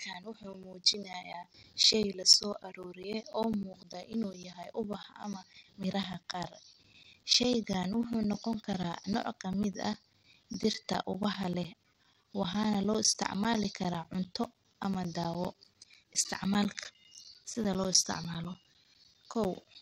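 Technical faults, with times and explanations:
0.13–19.75 s: periodic USB or driver dropouts. Every 0.1 s something stalls the audio path and about 10 ms of speech becomes silence, giving a steady ten-per-second ticking. The waveform shows evenly spaced flat notches, and the spectrogram shows regular thin vertical broadband lines.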